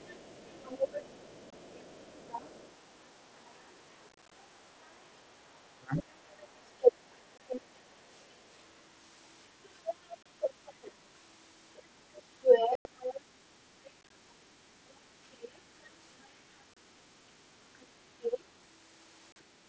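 Right from the start there's other side's voice leaking through: a second voice sits under the talker from 0 to 7.65 s, about 20 dB down. The phone is most likely playing the far end on its speaker, and the echo canceller isn't stripping all of it back out of the mic. Underneath that, at 1.50 s, you get the first unconcealed Bluetooth headset packet loss, a hole of about 22 ms with hard edges. The headset-to-phone link dropped audio and nothing filled the gap. At 4.09 to 4.32 s it gets rough: about 113 ms lost in bits spread across roughly 0.23 s, none longer than 30 ms, so it comes across as crackly and chopped.

At 5.67 to 5.93 s there's speech suppressed in double talk. Both sides seem to be talking, and the talker's voice dips in pieces, something like 35 dB at its deepest, for about a third of a second in total. That's likely the canceller failing to tell the talker from the echo and ducking everything. 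Another short dropout of about 22 ms hits at 7.38 s.

The leak comes back at 9.63 to 10.92 s, now only about 10 dB under the talker, with a 30 ms hole at 10.23 s. At 11.76 to 13.21 s the other voice is about as loud as the talker. Inside that stretch there's a clear gap of about 100 ms from 12.75 to 12.85 s. A tiny flick of echo shows up at 13.85 to 13.90 s, about 30 dB down. Then 14.01 to 14.11 s has scattered losses totalling 45 ms, each 15 ms or less, which sound like a quick rattle. The echo returns around 20 dB down at 15.32 to 16.26 s, and there's a 30 ms drop at 16.74 s. It's back about 10 dB down at 17.80 to 18.44 s. The last dropout, about 38 ms, falls at 19.32 s.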